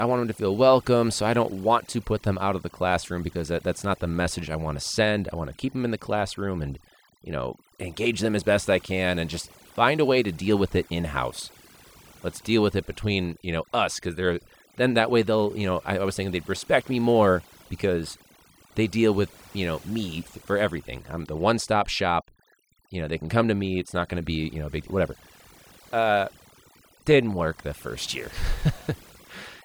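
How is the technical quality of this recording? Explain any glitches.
The recording is compromised by overdone noise removal from start to finish. A noise reducer set far too aggressively shuts down individual frequency bands whenever they resemble its noise estimate, taking quieter parts of the speech with them. Pauses collapse into near silence with twinkling specks.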